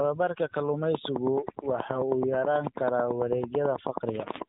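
Throughout the speech, overdone noise removal leaves the background at near silence dotted with twinkling specks, and quieter parts of the voice were pulled down along with the noise. Unlike simple gating or a plain low level, the damage is in separate frequency bands switching on and off, so the residue glitters rather than pumping or cutting out whole.

The AMR narrowband mobile codec is also present from start to finish. Nothing above about 3.8 kHz gets through, and the voice has a buzzy, synthetic edge where the codec rebuilds it from a vocal-tract model fed by sparse pulses. The plainly audible coarseness points to a low-rate mode, consistent with about 7.4 kbps. A simple low-pass filter would dull the sound without that artificial buzz.

From 0.95 s to 4.43 s a train of clicks runs over everything, around thirty sharp ticks at a steady 9.2 per second, peaking about 15 dB above the speech and continuing through the pauses. 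That evenly repeating pattern of near-identical pulses is most likely interference or a faulty connection. Random crackle from a damaged source would come at irregular intervals and vary in shape.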